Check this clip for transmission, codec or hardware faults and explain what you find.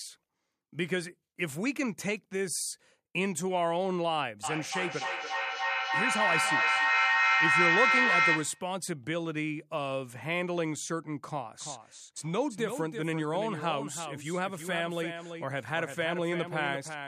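Two faults are audible, both producing repeats spaced about a third of a second apart.

From 4.43 to 8.79 s, speech rings back repeatedly, building to about 6 dB above the talker: feedback echo between two devices sharing a room, each re-sending the other's playback.

From 11.60 s to the end, a clean, undecayed copy trails about a third of a second behind, roughly 10 dB quieter: a doubled audio track, likely from a second, slower capture path.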